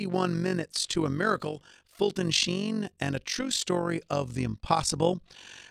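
Frames were windowed and overlapped without summing to constant gain, so this speech clip carries overlap-add ripple throughout: the level swings by about 11 dB around fifty times a second, giving a fast, rough flutter over every syllable.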